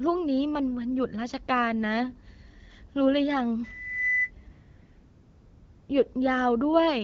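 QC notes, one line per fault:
3.63 to 4.31 s, loudspeaker feedback squeal: a 2 kHz tone swells over roughly 0.4 s to sit above the speech, as the mic-to-speaker loop gain passes unity.
4.51 to 5.89 s, AMR comfort noise: the background turns into steady, smooth synthetic hiss for 1.38 s, because the phone stopped sending speech frames and the receiver generated filler noise.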